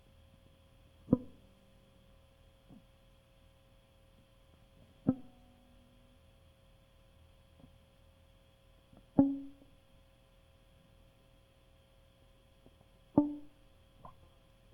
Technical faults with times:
none

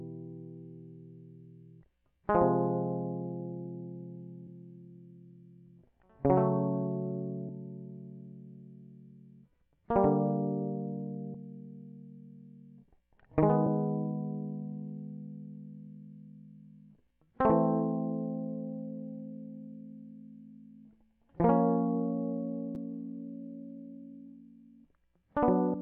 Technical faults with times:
4.46 damaged data in a compressed stream
7.48 damaged data in a compressed stream
11.33 damaged data in a compressed stream
13.66 damaged data in a compressed stream
25.73 damaged data in a compressed stream

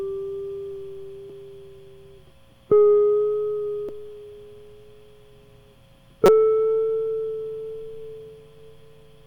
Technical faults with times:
1.29 damaged data in a compressed stream
3.89 damaged data in a compressed stream
6.25-6.29 damaged data in a compressed stream

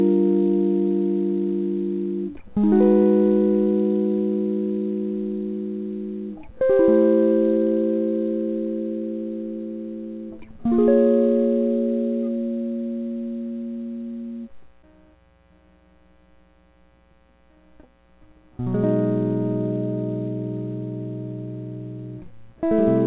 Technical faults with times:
none

